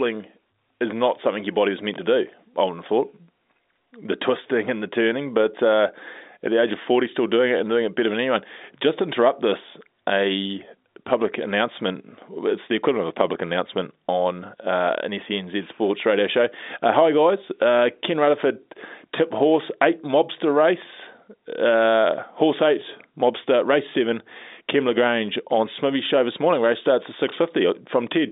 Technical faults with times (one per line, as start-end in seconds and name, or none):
1.94-1.98 chunks out of order
27.28-27.32 chunks out of order